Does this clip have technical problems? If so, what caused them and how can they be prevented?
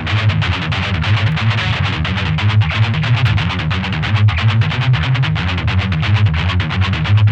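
Yes. Sharp clicks at 1.32 s and 3.27 s are likely dropped samples. A handful of samples, about a tenth of a millisecond, vanish, so the waveform steps abruptly to a later value and shows a thin vertical line on the spectrogram. Larger, steadily serviced audio buffers prevent this.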